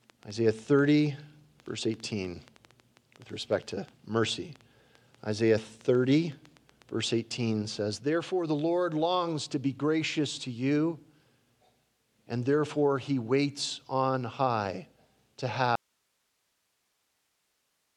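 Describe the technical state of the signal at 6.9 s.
At 6.9 s the signal carries a train of clicks, running from 0.10 s to 7.08 s. Around forty near-identical pulses arrive irregularly, about 5.7 per second, roughly as loud as the audio itself. They likely come from electrical interference or a faulty connection or power supply.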